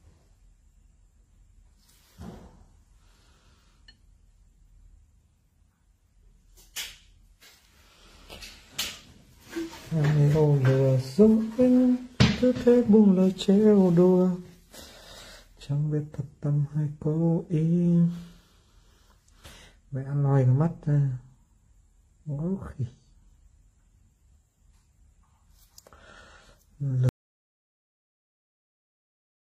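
An audio dropout to silence begins at 27.09 s and runs to the end of the clip, about 2.4 s of silence with no room tone, likely from the input being lost while recording continued. The waveform collapses to a flat line, and the spectrogram goes completely blank.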